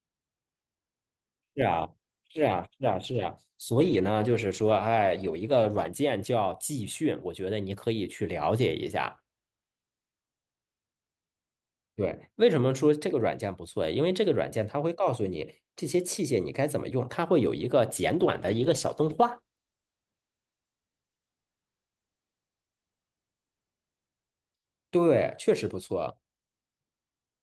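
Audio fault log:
1.75–6.03 s, call bitrate drop: speech turns rough, watery and muffled for about 4.2 s. This fits the encoder falling from roughly 64 to 15 kbps and coding coarsely without its highs.
18.15–26.63 s, call bitrate drop: the same dull, gritty coding returns and bottoms out for about 4.9 s. This points to another cut in the call's bandwidth estimate, starving the encoder of bits.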